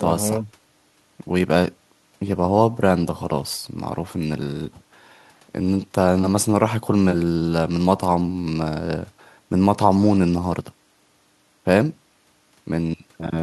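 No technical faults are audible anywhere in the speech.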